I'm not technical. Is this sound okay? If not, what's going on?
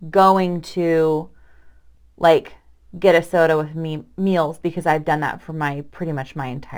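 No. All the way through, a faint gritty fizz rides on the speech. That's crude rate conversion: the recording's speed setting was changed, in a way that fits going from 48 kHz to 44.1 kHz, by simply skipping or doubling individual samples instead of smoothing them. Unlike steady background hiss, this grit appears only when the voice is loud or bright, and it adds odd tones that don't match the speaker's pitch.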